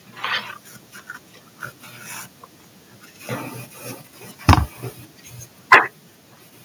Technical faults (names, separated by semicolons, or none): microphone overload; microphone volume stepped down